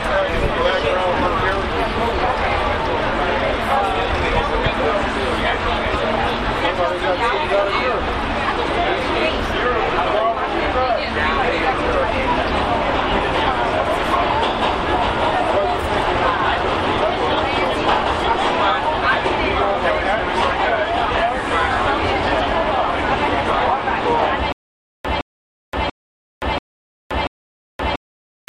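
From 24.52 s to the end, stutter with silent gaps: a 164 ms burst repeats every 687 ms, likely a stalled stream, drawn as identical blocks between flat 523 ms silences.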